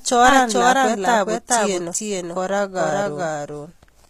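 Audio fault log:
throughout, doubled audio track: a second full-band copy, roughly as loud, trails by about 400 ms with no decay or room colour, so it is not echo or reverb; likely a duplicated capture path.
throughout, HE-AAC compression: s sounds turn gritty and lispy, and treble is rebuilt from copied lower bands and stops at 14.9 kHz; unlike plain low-pass dulling, it stays bright but wrong, likely from a bitrate near 24 kbps.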